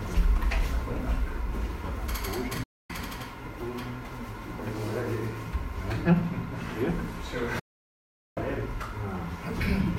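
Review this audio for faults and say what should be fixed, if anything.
Digital broadcast dropout at 2.63 to 2.90 s and again at 7.59 to 8.38 s. Each time the audio fades out within about 8 ms, stays silent, then resumes further along. The 0.26 s and 0.77 s of programme sent during those gaps are lost. The receiver muted because incoming frames stopped decoding cleanly. The hole lengths fit runs of 32 ms frames, about 8 and 24 of them. Better-sited reception with a stronger signal margin would prevent these mutes.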